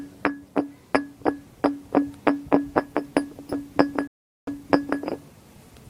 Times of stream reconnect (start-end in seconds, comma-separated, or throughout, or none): 4.07-5.01